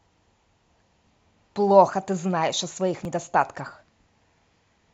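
At 3.05 s the speech skips as about 20 ms goes missing, likely audio missing between chunks as the recorder switches roughly 2-second blocks and splices them directly.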